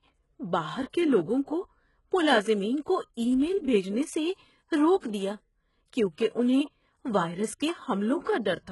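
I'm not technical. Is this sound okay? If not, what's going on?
No. Throughout the speech, the top of the sound stops at about 11.5 kHz, and the brightness below that sounds artificial, with gritty, lispy s sounds. This is likely HE-AAC compression, which keeps only the lower sound accurately and rebuilds the treble by copying lower parts upward, so it doesn't quite match.

From about 5.00 to 5.03 s there is pre-echo: a short hiss, about 36 ms long, just before a sharp attack. The compression spreads its noise across a block of sound, so the noise leaks into the quiet moment before the attack and softens it.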